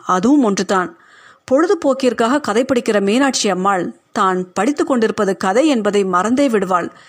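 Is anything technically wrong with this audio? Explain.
No, nothing in this speech recording stood out as technically wrong on listening.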